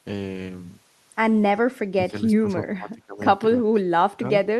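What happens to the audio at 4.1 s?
At 4.1 s you're right in the middle of a stretch from 3.63 to 4.34 s where the speech gets pushed way down, around 30 dB at its deepest. It's likely speech suppressed in double talk: the echo canceller couldn't tell the near talker from the far-end echo, so it ducked everything.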